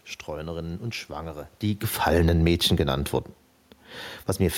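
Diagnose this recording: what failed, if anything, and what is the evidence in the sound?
Automatic gain falling in the call processing: from 1.91 to 2.81 s the level eases down by about 4 dB, and the room noise sinks with it, unlike the talker movement near 1.5 s.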